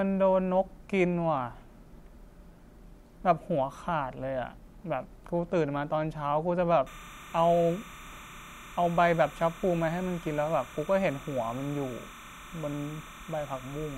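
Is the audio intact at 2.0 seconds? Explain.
Yes, the speech at 2.0 seconds is intact, with no audible fault at that moment.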